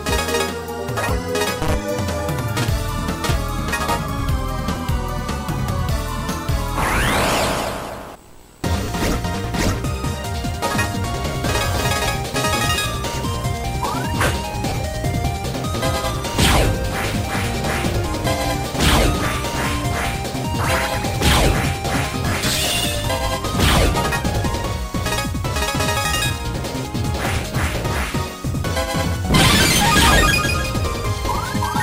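Lost LE Audio frames briefly smear the sound into noise rather than silence, as the decoder repeats the last spectrum with scrambled phase: at 4.75 s (20 ms), 8.84 s (40 ms), 14.69 to 14.77 s (50 ms in short bursts), 22.29 s (30 ms), and 30.30 s.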